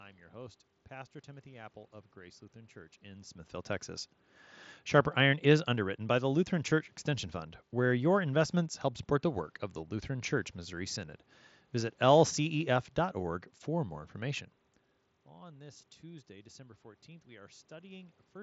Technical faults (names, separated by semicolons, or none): none